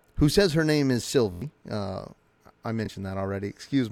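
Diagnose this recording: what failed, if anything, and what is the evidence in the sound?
Playback buffer underrun, heard as a repeated buffer. Just after "says her name is", from 1.32 to 1.42 s, a 23 ms slice sounds four extra times with a hard join at each repeat. This gives a brief buzzing stutter and loses roughly a tenth of a second of speech. One extra repeat at 2.86 to 2.88 s is a short click. The slice length fits a 1024-sample buffer: new audio arrived late, so the driver replayed its last block.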